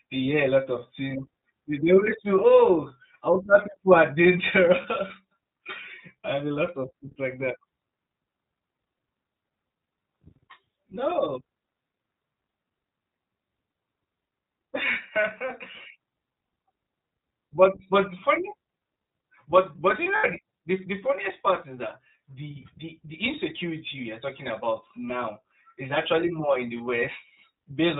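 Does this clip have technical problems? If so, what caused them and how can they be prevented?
Yes. The whole clip carries the sound of the iLBC codec, with plainly audible damage. The speech is clear but slightly rough and synthetic, and nothing above 4 kHz survives. On a spectrogram, energy stops at a hard ceiling near 4 kHz, and the harmonics look smeared and grainy. The rasp fits iLBC's 20 ms frames at its 15.2 kbps mode, where each frame's excitation is coded independently. Prevent this by negotiating a wideband codec such as Opus or G.722 instead of iLBC.

There are three lost iLBC frames. The first is at 4.82–4.86 s. The second is at 20.16–20.27 s, just after "but but you". The third is at 26.78–26.81 s, just after "actually more in the". In each gap the decoder repeats the last pitch cycle mixed with noise, which sounds like a brief held, buzzy vowel. The middle gap is longest, fitting about 80 ms of missing audio, and it fades. 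On a waveform the repeated cycles show as an unnaturally regular stretch. The spectrogram shows flat, frozen harmonic bands. Prevent this with a jitter buffer and forward error correction or redundancy on the network path.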